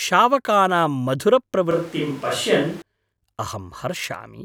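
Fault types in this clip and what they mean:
Switch to a distant microphone, 1.71 to 2.82 s: the speech abruptly turns roomy and hollow, with thinner bass, then snaps back just as suddenly. The overall level stays roughly the same, but room noise rises to about 20 dB below the speech. This is likely because the close microphone's signal dropped out and a pickup farther from the talker stood in, hearing more of the space and less of the direct sound.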